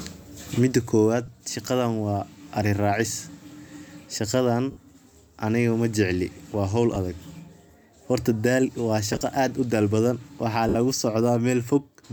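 Lost LE Audio frames at 1.26 s, 4.71–4.77 s, 6.95 s just after "aniga majecli waa hol", 9.13–9.21 s just before "aaad udal badan", and 10.69–10.75 s just after "aaad udal badan". The LC3 decoder fills each gap by repeating the last spectrum with random signs, fading it as the gap lengthens. Gaps run 10, 20, 40 and 60 ms, consistent with 10 ms frames. The 9.13 s loss is scattered over about 80 ms, with the longest run around 20 ms. Each gap comes through as a short noisy smear.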